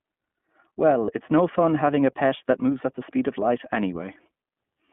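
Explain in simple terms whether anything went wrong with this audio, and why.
Yes, two things went wrong. The whole recording sounds thin and slightly rough, like an old phone line, with no crisp high end. That's the iLBC codec, a phone-call compressor that keeps only sound between about 150 Hz and 3.4 kHz and plainly roughens what it keeps.

From about 1.06 to 1.10 s, just before "it's no fun having", there's a brief buzzy, held smear. That's lost iLBC frames. A bit of audio went missing, which fits a single lost 20 ms chunk, and the decoder filled the hole by repeating the last sliver of sound with some noise. Clear speech returns right after.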